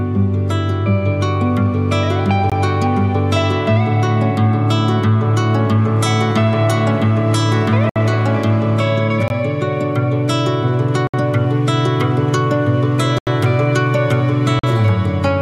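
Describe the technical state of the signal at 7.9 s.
At 7.9 s the output stage failed to deliver a block of samples, most plausibly because the buffer was not filled in time, and zeros went out in its place. The result is a block of digital silence from 7.89 to 7.96 s, a 64 ms gap. Because the sound cuts out and returns with no fade, the whole event is heard as a short, sharp hole in the audio.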